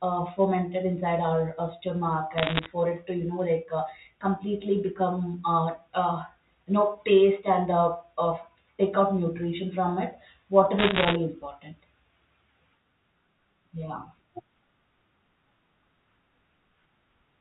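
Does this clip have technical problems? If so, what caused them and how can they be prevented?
Yes, there are bit errors on a digital phone line, with crackly bursts from 2.38 to 2.66 s and 10.78 to 11.16 s. Flipped bits corrupt single samples, so you hear sharp ticks over clean telephone-band speech, with roughly one percent of bits hit in the first burst and 1.5 percent in the second. Error-checked, well-maintained digital links prevent this.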